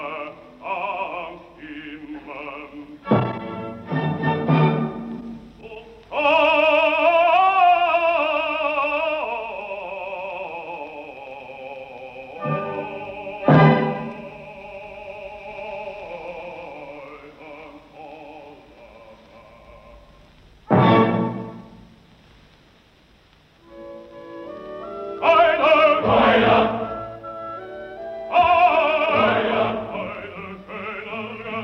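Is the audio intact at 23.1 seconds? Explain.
Yes, the audio is intact at 23.1 seconds, with no dropout, click, distortion or other fault at that point.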